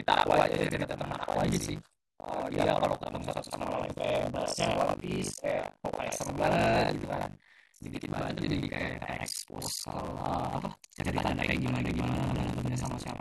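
From start to finish the speech carries a rough, robotic rattle at 50 Hz that rides on the sound and drops away whenever the signal goes quiet. That is buffer tearing: the software filling the playback ring buffer and the hardware reading it have slipped out of step and cross within every period, which fits a 20 ms period. About half of each chunk replays audio from roughly 70 ms earlier, with hard joins at both edges.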